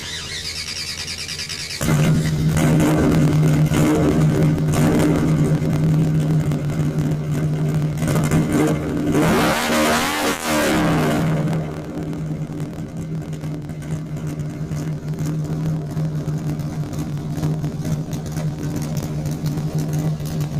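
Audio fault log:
Throughout: planar audio read as interleaved. Each 26.12 ms block plays twice at double speed, first the left half, then the right, raising pitch an octave with a 38.3 Hz buzz. The spectrogram shows doubled harmonics and vertical striping every 26 ms, and the waveform repeats in blocks.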